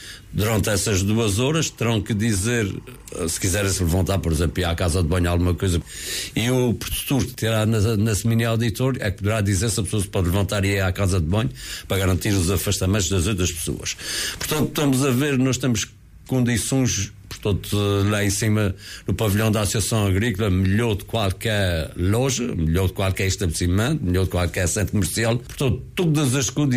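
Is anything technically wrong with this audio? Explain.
Yes. From 0.88 to 5.89 s a faint chirping warble sits roughly 35 dB beneath the sound. This is timecode bleed: 24-frames-per-second linear timecode leaking from a neighbouring track or cable, its square wave flipping between tones near 1 and 2 kHz.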